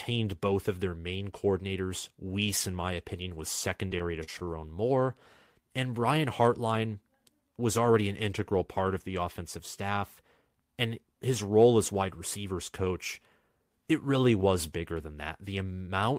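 Repeated packet loss (robotic sound) breaks up this speech recording from 3.87 to 4.50 s. Five separate holes open in quick succession, the longest about 38 ms. The receiver papers over each one by stretching the preceding sound forward, so roughly 118 ms is synthetic fill and about 80 ms is simply missing. With some 19% of that stretch concealed, the speech turns choppy. A jitter buffer speed-up follows from 10.23 to 10.56 s. The buffer had built up more audio than it targets, probably after a burst of delayed packets arrived together. To pull the delay back down, the receiver trimmed short pitch-period slices repeatedly, removing around 40 ms in total. Playback runs at about 109% speed over that third of a second while the pitch stays put, so the speech briefly sounds rushed.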